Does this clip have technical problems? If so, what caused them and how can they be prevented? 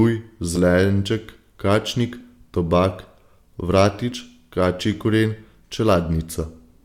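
Yes. Compressed frames are skipped at 0.55 to 0.58 s, 2.20 s, 4.11 s and 6.42 to 6.45 s. Each time the speech jumps forward by a few milliseconds to a few tens of milliseconds: about 40 ms at the first point, about 30 ms at the second and third, and about 10 ms at the last. That fits whole 10 ms codec frames going missing or being rejected by the decoder as damaged. To prevent this, deliver the stream over a reliable or error-protected path and use the codec's packet-loss concealment or forward error correction so that lost frames get filled in instead of dropped.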